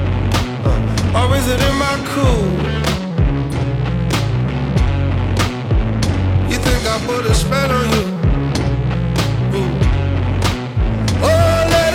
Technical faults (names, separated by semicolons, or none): AAC frame loss with concealment